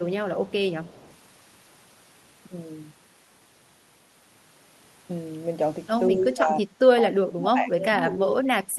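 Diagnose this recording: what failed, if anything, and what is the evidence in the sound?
Echo leak, 0.47–0.55 s and 0.84–1.16 s: a faint copy trails 175 ms behind, about 30 dB down, likely residue a loudspeaker-side echo canceller missed.

Speech suppressed in double talk, 6.1–6.64 s and from 7.0 s onward: level dips about 15 dB, then about 30 dB, likely echo cancellation ducking overlapping talk.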